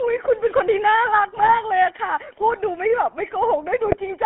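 Throughout, the speech carries the buzzy, gravelly roughness of the GSM full-rate codec, consistent with a 13 kbit/s coder. Its pulse-driven excitation rebuilds the voice inside roughly 250 Hz to 3.4 kHz. A spectrogram shows nothing above 3.4 kHz.

GSM bit errors strike from 1.36 to 1.60 s and again from 3.86 to 3.97 s. Corrupted filter, pitch and gain values produce squawks and gargling pops, visible as abrupt waveform spikes and smeared spectral blotches.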